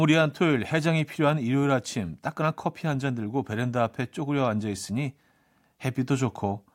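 Speech, with no audible faults.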